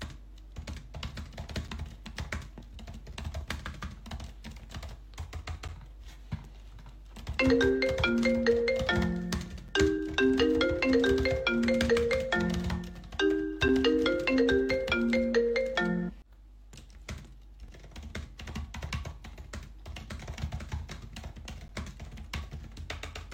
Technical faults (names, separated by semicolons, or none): gap between stream segments